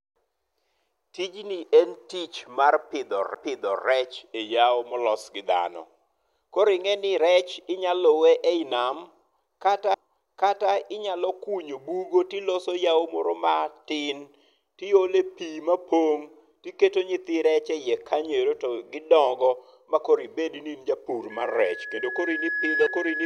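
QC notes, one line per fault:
3.34 s, 9.94 s and 22.86 s, CD skip: a tick and a brief mute of a few milliseconds, after "en tich" and just before "inyalo kunyo bugo to". The laser jumped to another turn of the spiral, so the sound resumes from a different point with a discontinuity.
21.30 s to end, loudspeaker feedback squeal: after "in japur", a 1.7 kHz tone swells over roughly two seconds to about 5 dB above the speech. The microphone is picking up its own loudspeaker, and loop gain exceeds unity at that frequency, so the tone keeps building.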